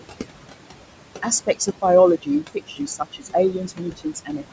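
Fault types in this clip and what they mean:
noise suppressor artifacts: Present throughout the clip, where the suppressor pulls the room noise down by about 21 dB. It estimates which frequency bands hold steady background noise and attenuates them frame by frame, so the room noise, which starts only about 9 dB below the speech, falls away in the gaps and swells back under the voice.
speech cut by the noise suppressor: At 1.46 to 1.84 s, 2.18 to 3.35 s, and from 3.52 s to the end, the suppressor treats parts of the voice as noise and turns them down with the background. Level drops reach about 17, 20 and 21 dB. The loss covers roughly a tenth of a second in the first stretch, about half a second in the second, and around 0.7 s in the last, leaving soft sounds and word endings swallowed.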